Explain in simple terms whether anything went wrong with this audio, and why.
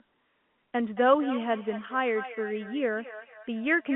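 From about 0.96 s to the end, the speech picks up a faint, hollow repeat of itself, each sound coming back roughly a fifth of a second later and staying well below the original. This is feedback echo between two devices: two phones or computers in the same room share the call, one plays the other's audio aloud, and that microphone hears it again. Each device's echo canceller removes only its own playback, so the repeat gets through on this telephone-quality line.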